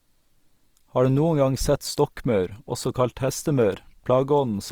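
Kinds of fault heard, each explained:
Opus compression, throughout: the speech turns rough and grainy, with noise filling in fine detail. That is likely the codec's music (CELT) mode padding starved bands with folded or noise content. The damage is plainly audible and fits roughly 24 kbps, with nothing left above 20.3 kHz.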